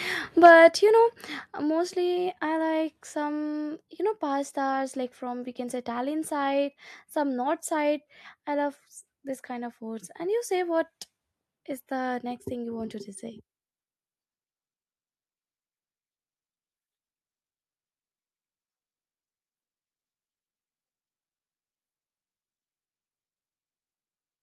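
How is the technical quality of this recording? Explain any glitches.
One glitch stands out. At 1.47 s, the call software likely stepped the microphone volume down in one go, so the speech and background drop by about 5 dB at once.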